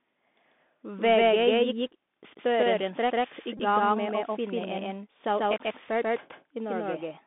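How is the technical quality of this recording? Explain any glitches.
The technical quality is poor. The speech runs through a narrowband headset link the whole way and is heard twice, and there is one short buzzing glitch near the middle.

Doubled audio track: across the whole clip, an identical full-band copy trails the speech by about 150 ms at roughly equal loudness, likely from the same signal being captured again by a slower path. Unlike a room echo, the copy has no decay or reverberant colour.

Bluetooth CVSD headset codec: throughout, the sound is confined to roughly 200 Hz to 3.6 kHz. The one-bit up/down coder lets its step size lag loud high sounds, so s sounds turn scratchy over a granular hiss. That grainy hiss, rather than the smearing of a lowpass filter, identifies it.

Bluetooth headset packet repeated: from 3.57 to 3.60 s, lost headset packets were replaced by re-decoding the last good one every 3.75 ms. 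About 19 ms of audio is missing, which fits roughly five lost packets, and it gives a brief steady buzz near 267 Hz. A gap of silence would sound different.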